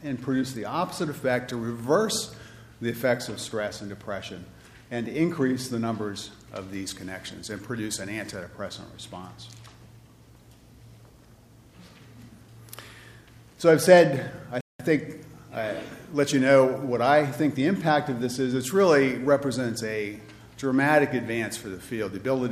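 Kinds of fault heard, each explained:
Rebuffering stall: the player runs dry of downloaded audio at about 14.61 s and just waits, so you get a dead-silent gap until 14.80 s. Then playback picks up exactly where it left off, nothing skipped, with roughly 190 ms added to the running time.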